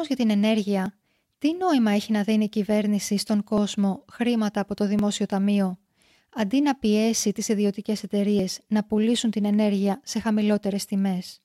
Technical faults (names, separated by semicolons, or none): dropped buffer (overrun)